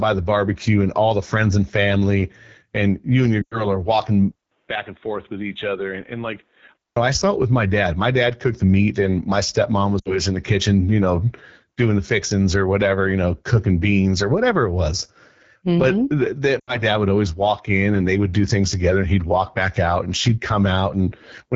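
Speech coded throughout with the AMR wideband (HD Voice) codec at 8.85 kbit/s, a low rate that leaves it rough and raspy, with the spectrogram's top band from 6.4 to 7 kHz filled with shaped noise. Lost AMR speech frames at 3.42–3.65 s after "and you and your", 10.00–10.16 s, and 16.59–16.79 s before "dad would always walk" drop the sound to near silence within two frames, appearing as frozen harmonics that thin to near-blank. From 4.31 to 6.96 s, ending just before "I saw it with", the input was likely switched to a poorer device. After a 200 ms silence, the sound goes dull and about 10 dB quieter, with nothing above 3.8 kHz, so the waveform shrinks and the spectrogram shows a hard ceiling over a faint new noise floor.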